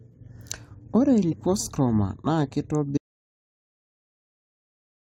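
At 1.31 to 1.33 s the speech is broken by a brief glitch lasting about 22 ms, the mark of damaged data in a compressed stream. A stretch of the encoded bytes was corrupted, so the decoder misread those frames, lost sync and hunted for the next valid frame header before resuming. On a spectrogram and waveform it shows as a short disturbance with a discontinuity where the decoder picks up again.

From 2.98 s the audio dropout to silence begins: the speech cuts off abruptly mid-flow and never returns, leaving about 2.2 s of silence running to the end. There is no room tone or noise floor, so the input was most likely lost, perhaps through a disconnected device or a stray mute, while recording carried on. The waveform collapses to a flat line, and the spectrogram goes completely blank from that point.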